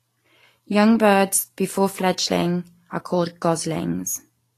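Speech throughout carries plainly audible Vorbis compression damage, likely from a low-bitrate encode near 34 kbps: the treble above 14.2 kHz is gone and what remains below it sounds hissy and grainy rather than just dull.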